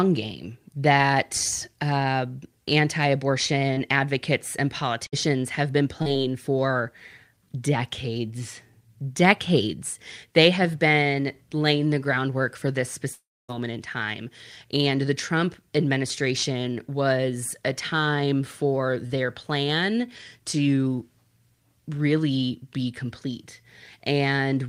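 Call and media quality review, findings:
Short concealed packet loss at 3.73 s, 6.02 s and 19.06 s: brief smear or wobble, 40 ms missing, about 32 ms patched by the jitter buffer's concealment from the preceding sound. The later two also stretch timing slightly. Spectrogram: smudged harmonics, no clean onset.

Burst of packet loss, 5.07–5.14 s: consecutive packets lost, 60 ms missing, about 59 ms concealed as a held buzz or fading hiss before audio resumes further on. Waveform shows the last sound continued, shrinking in amplitude, then an abrupt content jump.

Long network dropout, 13.13–13.50 s: 360 ms gone, a fading buzz or hiss continuing the last sound, then roughly a quarter-second of silence before audio returns past the gap. Likely an interruption on the network path. Spectrogram: smeared tail into a blank band.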